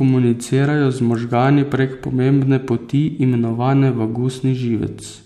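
No technical faults are audible.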